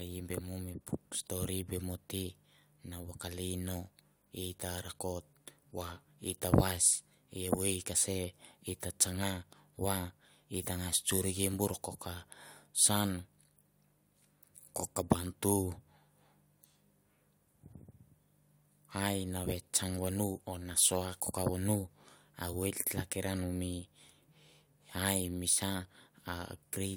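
Nothing in this recording trips up the ear: no glitch, dropout or distortion turns up anywhere along the way.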